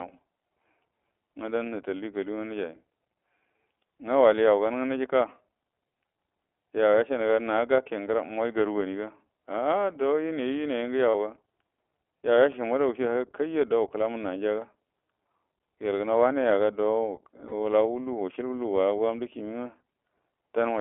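Throughout, the speech carries the iLBC codec: the band is confined to roughly 300 Hz to 3.5 kHz, and each 20 ms frame's excitation is coded independently, leaving a plainly audible rough, synthetic edge, which fits the 15.2 kbps mode.

At 11.10–11.15 s and again at 17.48–17.53 s come lost iLBC frames, each about 40 ms, which fits two 20 ms frames. The decoder repeats the last pitch cycle with added noise, heard as a brief held, buzzy vowel, and the voice is right again almost at once afterward.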